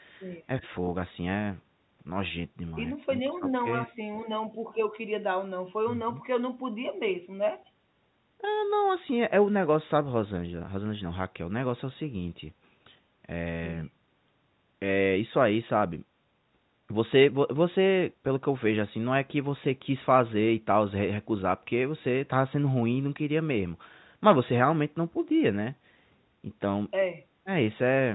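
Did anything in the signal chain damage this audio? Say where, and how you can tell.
No, nothing in the chain damaged this speech; it sounds like an ordinary phone call, with the top end stopping around 4 kHz as telephone coding always does.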